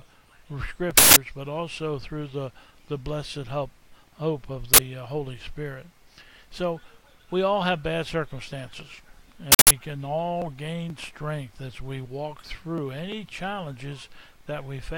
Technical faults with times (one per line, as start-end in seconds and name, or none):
0.98-1.16 uninitialised buffer
4.74-4.78 uninitialised buffer
9.52-9.71 uninitialised buffer